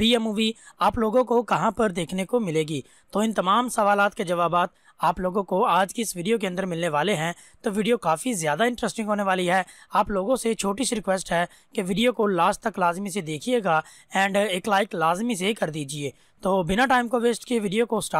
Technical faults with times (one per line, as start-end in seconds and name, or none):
0.10-18.19 clock slip clicks